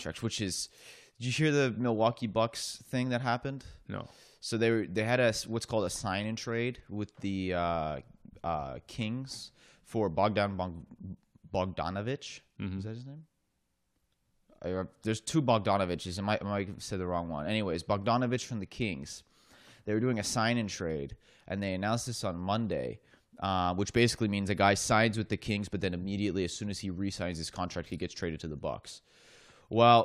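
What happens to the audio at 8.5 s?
Nothing goes wrong at 8.5 s; the speech runs through that point intact, with no dropout, glitch or other fault to be heard.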